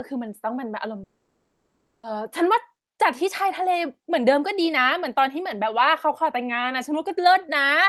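At 1.03 s the speech gives way to a brief buzzy or hissy continuation of the last sound that fades almost at once, leaving about 0.96 s of silence until the audio returns at 2.05 s with roughly a second of material gone. The likely cause is a long network dropout: packets stopped arriving, the receiver's concealment stretched the final sound briefly and then gave up, and playback resumed further on without the lost stretch.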